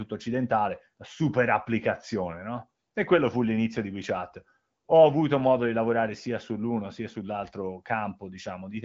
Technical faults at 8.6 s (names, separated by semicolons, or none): none